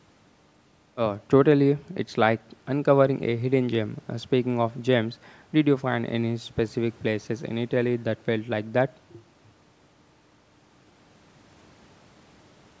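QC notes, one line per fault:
Nothing to flag here: the speech just carries the usual call microphone processing, with the lowest bass trimmed and nothing above 8 kHz, which is how that path normally sounds.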